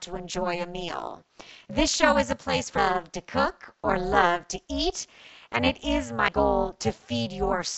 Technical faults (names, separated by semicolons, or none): overlap-add ripple; damaged data in a compressed stream